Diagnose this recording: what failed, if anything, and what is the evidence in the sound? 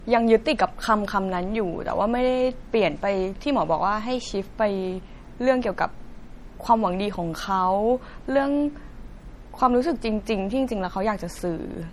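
Swirly codec artefacts persist throughout the speech: low-bitrate audio saved at a high bitrate, likely a 48 kbit/s MP3 re-encoded at 320 kbit/s.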